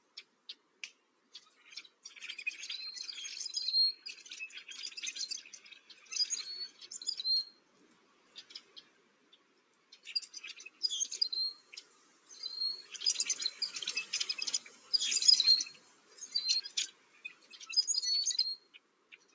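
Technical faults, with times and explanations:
Throughout, noise suppressor applied to music or sounds: a speech-tuned suppressor keeps treating steady tones and ambience as noise, so level swings by roughly 15 dB. Attacks pass while sustained sound sinks, giving a pumping, thinning effect rather than a fixed dullness.
0–2.05 s, 5.78–6.1 s, 7.52–10.06 s, 11.58–12.3 s, 14.62–14.92 s, 15.73–16.28 s, 16.67–17.65 s and 18.59–19.34 s, sound cut by the noise suppressor: held or decaying sound drops by about 8 to 14 dB and its tails are cut short. The onsets stay intact, so these are not dropouts.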